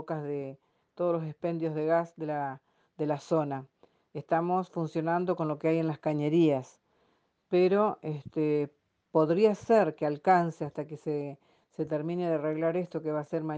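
The signal holds steady throughout, with no audible technical problems at any point in the audio.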